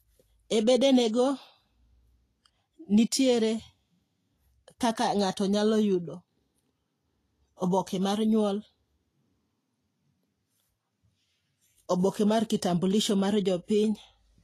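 All the way through, the speech has that hissy, grainy treble and nothing above about 14.1 kHz, likely Vorbis compression at a low bitrate around 31 kbps.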